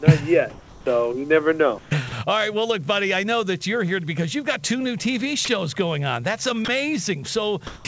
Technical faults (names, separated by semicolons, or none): comfort noise in place of the background; sound dropped by the voice detector